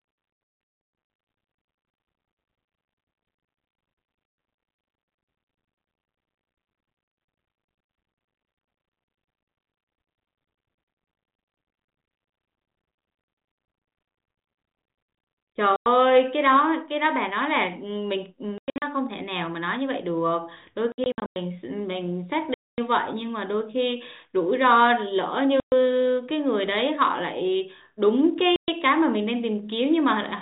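Packet loss filled with silence punches holes in the speech at 0.3–1.1 s (about 440 ms lost, runs up to 140 ms), then 4.26, 15.76, 18.58, 20.92, 22.54, 25.6 and 28.56 s. Gap lengths fit 20 ms packets, and the gaps have hard edges.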